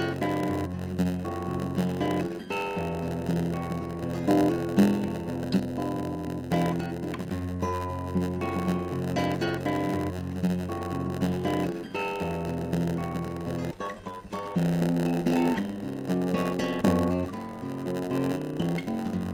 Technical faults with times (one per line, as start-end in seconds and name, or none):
0.00-19.33 block size mismatch (padded)